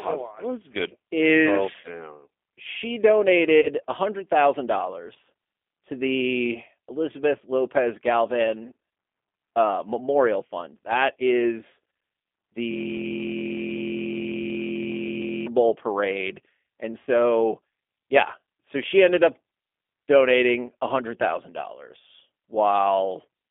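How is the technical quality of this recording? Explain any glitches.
The recording is telephone-grade, with audible codec coloration throughout and three brief concealment glitches.

For the full length, the speech carries G.729 codec damage. The band runs only from about 300 Hz to 3.5 kHz, and the voice sounds plainly rough and slightly synthetic, which fits G.729A at 8 kbit/s. The codec rebuilds each short frame from a vocal-tract filter, a pitch estimate and a few pulses rather than the real waveform. That is what separates it from a simple band-limited line: the graininess and buzz come from the resynthesis, not just the missing highs.

At 1.81 to 1.90 s, 3.61 to 3.68 s and 17.01 to 17.08 s, VoIP packet loss concealed by the speech codec briefly smears the voice. The first two gaps fit about 30 ms of lost audio, likely a single packet each, and the third fits about 60 ms, likely two. 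The decoder kept repeating its last pitch and filter at falling gain, so the sound stretches into a short buzzy tone or coloured noise that fades instead of dropping to silence. The voice stays weak for a moment after the gap while the frame-by-frame prediction recovers. That lingering tail separates it from a hard dropout or a click.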